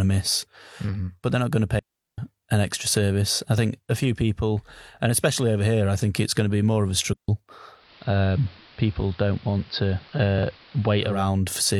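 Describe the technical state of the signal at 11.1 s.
At 11.1 s the speech is still in a digital radio blend to analogue, running 7.68 to 11.29 s: the receiver has cross-faded over about 0.3 s to the AM broadcast, so hiss sits roughly 25 dB below, and the level drops about 1 dB. That added hiss and gradual crossfade separate it from a plain low-pass filter or a dropout.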